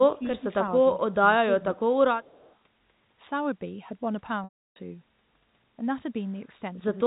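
A telephone speech recording, band-limited to 4 kHz in the way of G.711 coding, in which the talker's level drops three times while the far side is evidently speaking: at 0.18 to 0.43 s by about 10 dB, at 0.92 to 1.18 s by about 5 dB, and at 1.59 to 2.01 s by about 20 dB for roughly 400 ms. This is speech suppressed in double talk, likely the echo canceller ducking the talker along with the far end. Unlike packet loss, the sound dips and thins rather than freezing. From 2.23 to 2.54 s a faint echo leak appears, a copy of the talker's sound trailing by 267 ms at about 35 dB below the speech, likely residue the far end's echo canceller failed to remove. Its fixed delay separates it from room reverberation, which would decay smoothly. At 4.44 s a 320 ms gap shows packet loss with pitch repetition: the last pitch period is held as a short buzzy tone, fades to silence, and the sound cross-fades back at 4.76 s. 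The gap fits a run of about sixteen 20 ms packets. The held, repeating tone and the clean return are what set this apart from double-talk suppression.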